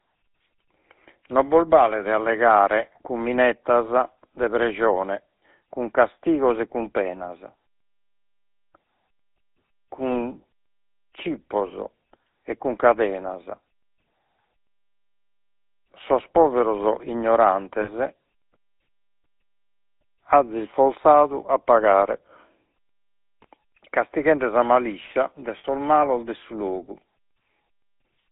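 The clip is speech carried through the GSM full-rate codec for its whole length. The band runs only from about 250 Hz to 3.7 kHz, so it sounds thin and boxed in. The codec damage is plainly audible. The speech has a coarse, buzzy grain, as if rasped. This comes from rebuilding the sound with a vocal-tract filter fed by a sparse pulse train. The overall character fits a 13 kbps full-rate GSM link.

Lost GSM frames cause three short faults. The first runs from 10.10 to 10.13 s. The second runs from 17.82 to 17.90 s. The third runs from 25.58 to 25.65 s, between "sa maliscia de" and "malos de su". In each gap the decoder repeats the last good frame. That gives a brief metallic, rough ring in place of real speech. The first gap points to one lost 20 ms frame. The later two fit about three frames, roughly 60 ms each.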